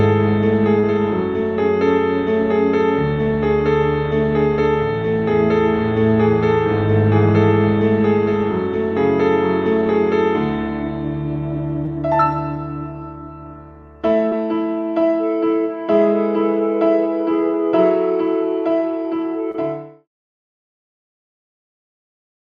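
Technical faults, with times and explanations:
0.79–0.85 s, 11.85–11.89 s, 14.29–14.33 s, 19.51–19.56 s, short concealed packet loss: about 40 ms went missing at the first point and about 20 ms at each later one. The decoder bridged each gap by extending the preceding sound, pitched or noise-like, before blending back into the real audio. This is heard as a brief smear or wobble on the Opus call path, which is band-limited to about 12 kHz. The last gap falls as the smooth fade-out begins, around 19.5 s.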